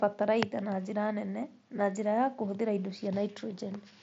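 No technical faults are present in this speech, which comes through a Bluetooth mSBC headset link whose band ends at about 7.7 kHz and which carries the light grain that this wideband codec normally leaves on the signal.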